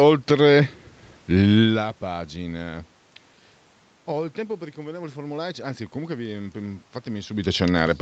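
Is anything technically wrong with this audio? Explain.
No, nothing is technically wrong with this audio.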